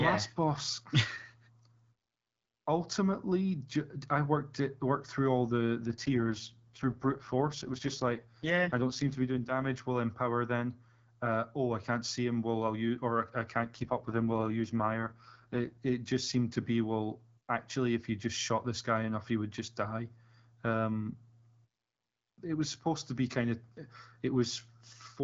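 From 5.81 to 9.80 s, after "worked through all the" and until "while empower then", and again from 13.61 to 15.79 s, after "I'll use or I" until "it just seemed to", an AMR rate drop turns the speech rough and synthetic. The roughness fits the wideband codec falling from 12.65 to its 6.6 kbit/s mode. Unlike a dropout or narrowing band, there is no gap and the bandwidth stays put. Clarity returns when the rate recovers.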